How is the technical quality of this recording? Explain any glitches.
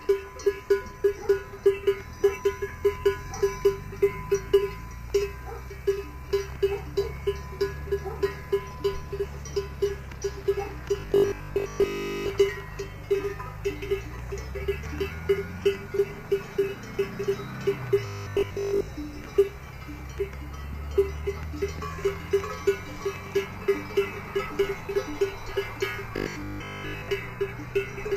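Three glitches stand out, all the same kind: robotic sound from repeated short buffers, at 11.0–12.3 s, 18.07–18.89 s and 26.16–27.08 s. Each time the sound collapses into a rigid metallic buzz at 50 Hz. That's likely audio arriving too slowly, so the player keeps looping the last 20 ms chunk and skips most of the real material, which is why a fixed 50 Hz tone gets stamped on whatever is passing through.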